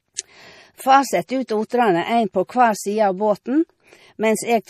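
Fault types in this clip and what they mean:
MP3 compression: The speech sounds watery and swirly, with plainly audible damage and nothing at all above 15.1 kHz. The likely cause is MP3 encoding short of bits, at a rate that fits about 40 kbps, cutting the treble and switching weak frequency lines on and off.
pre-echo: A brief hiss of about 26 ms runs from 1.46 to 1.49 s, just ahead of a sharp attack that sounds softened. The codec spread noise sized for the loud onset across its whole block, filling the quiet moment before it.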